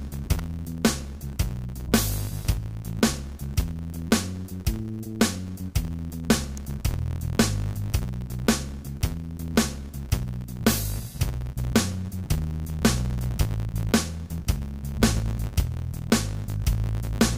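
A filter in the processing chain loses its internal state at each block boundary and restarts from silence, so every block opens with a small transient. Because this happens across the whole clip, the blocks arrive every 10 ms, giving a steady buzz at 100 Hz made of rapid, regular ticks. The buzz rises and falls with the loudness of the audio underneath, growing stronger in louder passages and fading as the sound quietens.

At 0.39 s and again at 6.57 s, a very short, sharp snap cuts in on top of the sound. The first lasts about 5 ms and the second only about 2 ms. Each sits above the audio rather than replacing it. This is most likely an electrical switching spike: a nearby switch, motor or static discharge arcing briefly and being picked up on the audio line.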